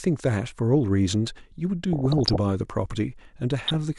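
Weak DAB reception lets bit errors slip past error correction into the MP2 audio of this speech clip, corrupting sub-band samples and scale factors. The result is DAB burbling, short blips of noise in single sub-bands, from 1.93 to 2.40 s and again from 3.68 to 3.75 s.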